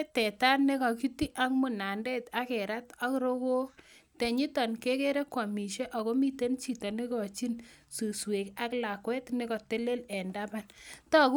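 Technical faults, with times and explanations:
Nothing in this speech recording stands out as a technical fault, so there's nothing to flag here.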